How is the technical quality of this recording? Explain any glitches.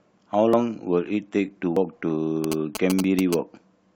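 The recording has several audible glitches in three kinds: skips in the speech, a buzzing interference burst, and one short jump near the end.

Dropped buffer (overrun) at 0.53 s, 1.77 s and 3.04 s. Each is heard as a jump where the speech skips forward, losing around 50 ms, 70 ms and 20 ms respectively, with no silence at the join. The likely cause is the recording software failing to collect a block of samples before the hardware overwrote it. The two sides of the missing piece are butted together, producing the hard discontinuity.

GSM signalling bursts from 2.44 s to 3.34 s. A nearby 2G phone exchanging signalling with its network transmits short groups of radio bursts, and the audio circuitry rectifies them into sound. Here that comes through as a galloping dit-dit-dit of short 217 Hz buzzes, sitting about 5 dB below the speech.

Compressed frames skipped at 3.18 s, inside the buzzing passage. 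One frame of the encoded audio, 21.3 ms long, was either missing or rejected by the decoder as damaged, so about 20 ms of speech is gone and the audio jumps ahead by that length.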